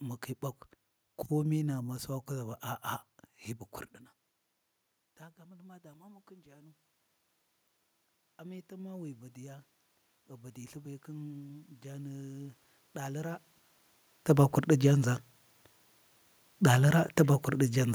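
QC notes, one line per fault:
10.28–13.47 s: automatic gain rising. The gain control judged the input too quiet and lifted it by about 6 dB, so speech and room noise swell together.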